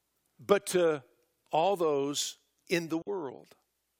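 Audio packets likely reached the headphones too late, a Bluetooth dropout: from 3.02 to 3.09 s the speech drops to silence, then resumes further along.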